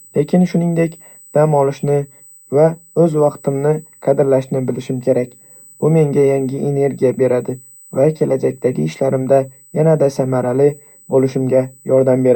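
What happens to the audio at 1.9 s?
USB whine is present at 1.9 s, as it is throughout the clip: a steady 8 kHz tone, roughly 30 dB below the speech, from current drawn in 125-microsecond bus microframes leaking into the audio path.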